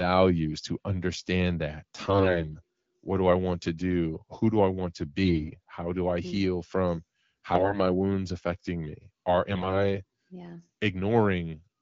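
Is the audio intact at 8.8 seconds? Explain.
Yes, the audio is intact at 8.8 seconds, with the speech carried cleanly through the AMR wideband (HD Voice) codec at 12.65 kbit/s.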